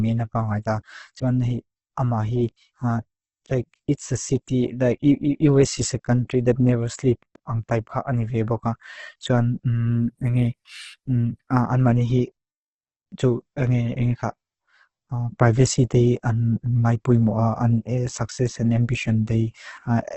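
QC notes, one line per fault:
Throughout, Opus compression: the speech is heavily damaged, rough and grainy, with nothing above 8.2 kHz, likely from Opus music mode at a rate fitting about 12 kbps. Starved bands are noise-filled rather than emptied, so it sounds gritty, not swirling like MP3.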